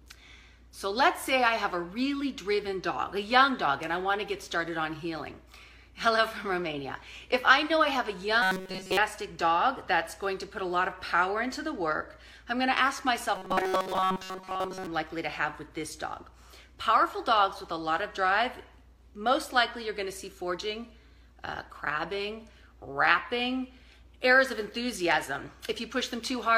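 From 8.42 to 8.97 s, and again from 13.36 to 14.87 s, robotic sound from repeated short buffers sets in. The audio becomes a rigid 188 Hz buzz, fully in the first stretch and mostly in the second. The likely cause is a roughly 5 ms chunk replayed while fresh audio is skipped.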